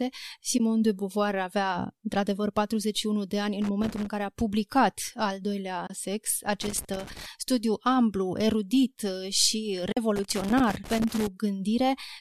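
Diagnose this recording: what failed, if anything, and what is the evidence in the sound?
Network stage, AAC frame loss with muting: the decoder zeroed lost frames, leaving soft gaps of 20 to 50 ms at 0.58 s, 5.87 s (after "care a publicat al"), and 9.92 s.

Analogue wiring, loose connector crackle: an intermittent contact chopped the signal into irregular crackle at 3.62 to 4.06 s (after "de ani"), 6.62 to 7.26 s, and 10.16 to 11.27 s.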